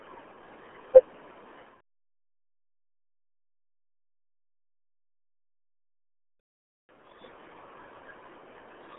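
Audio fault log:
Throughout, RealAudio 14.4 codec: the speech passes through an 8 kbit/s dial-up-era coder with heavy codec damage. Nothing above 3.6 kHz survives, and the band is narrowed to roughly 250 Hz–3.4 kHz, so consonants blur and voices turn muffled and gargly.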